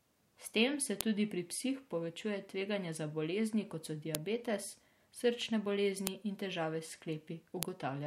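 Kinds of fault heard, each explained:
File header played as audio: leftover WAV header bytes between joined segments play as samples, causing sharp clicks at 1.01, 4.15, 6.07 and 7.63 s.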